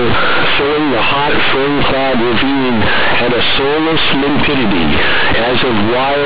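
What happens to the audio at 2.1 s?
At 2.1 s, as throughout the clip, the sound is hit by companded audio read as linear: mu-law telephone bytes are played as plain 8-bit samples without expansion, so every sign change jumps across about half the output range. The speech comes out as very loud, buzzy distortion, with heavy noise filling the pauses. A waveform shows a large, squared-off block even in quiet gaps, and a spectrogram shows dense broadband energy up to the 4 kHz limit.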